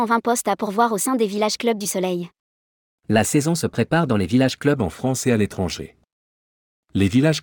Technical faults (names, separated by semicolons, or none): wrong sample rate